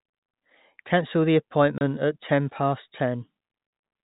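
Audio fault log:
1.78 to 1.81 s and 3.67 to 3.72 s, packet loss filled with silence: The speech drops out completely twice, for 30 ms and then 50 ms. Audio packets failed to arrive, and the receiver inserted pure silence in their place. Both gaps are multiples of 10 ms, which fits 10 ms packets. The signal stops and restarts abruptly at each gap. Through the narrow telephone band of the G.711 coding, the holes are heard as gaps in the speech.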